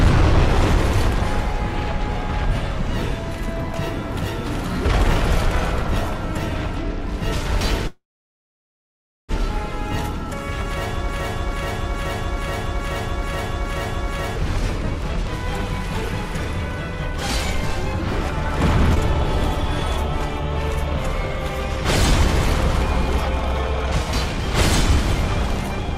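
At 7.87 to 9.32 s a call audio freeze inserts about 1.4 s, mostly silence, likely from delayed packets draining the jitter buffer. Audio resumes exactly where it stopped, with nothing lost.

From 11.09 to 14.36 s a broken-record loop repeats a 0.43 s fragment eight times back to back, likely a stalled stream resending its last chunk. Unlike the freeze, the audio that should have played there is gone.

At 18.95 to 18.99 s a skip ahead jumps forward with only a 14 ms fill. Roughly half a second is dropped, with no pause or repetition to mark it.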